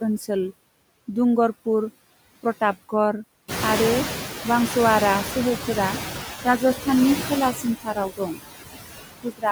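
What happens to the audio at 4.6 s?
At 4.6 s the noise suppressor is catching up. The room noise jumps by about 15 dB at roughly 3.5 s, and the suppressor's noise estimate lags behind. From 3.48 to 5.61 s the noise is cut by only about 7 dB. It comes through with less reduction at first and sits about 8 dB below the speech, then sinks as the estimate adapts over 2.13 s.

Noise suppressor artifacts are also present here. The suppressor lowers the bands it treats as steady noise, frame by frame, with about 17 dB of cut once settled. The residual noise dips between words and swells under them.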